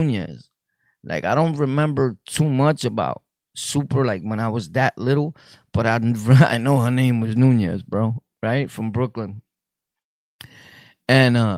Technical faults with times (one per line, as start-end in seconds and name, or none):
none